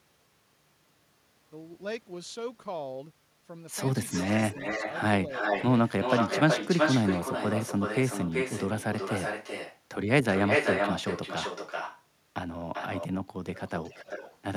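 Echo leak at 4.09, 5.32, 5.89, 10.32, 12.73 and 13.54 s: a copy of the speech trails by 370–390 ms, at times as loud, fading toward the end. The likely cause is a loudspeaker whose echo canceller missed it.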